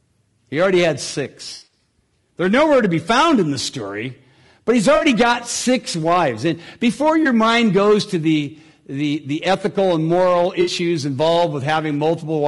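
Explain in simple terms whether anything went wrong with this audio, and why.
A few things went wrong here. The first is hard clipping: the speech was pushed louder than the recording chain could handle, so the tops of the loudest moments got sliced flat. That adds a crackly, harsh edge on peaks, and it affects a small fraction of the sound all the way through.

The whole clip also has a rough, grainy quality, with a hiss-like fuzz between the tones of the voice and a thin, artificial top end. That points to low-delay AAC compression, the kind used on video calls, likely squeezed down too hard.

Then there's AAC frame loss with concealment: bits of the stream went missing, and the decoder patched the gaps by guessing from what came just before. The longest stretch is from 1.53 to 1.72 s, right after "already had". It's a smeared, noisy patch with missing pieces scattered through it. Shorter versions land at 4.95 to 5.05 s, at 7.23 to 7.26 s just before "mind goes to the", and at 10.61 to 10.71 s right after "the ethical and moral".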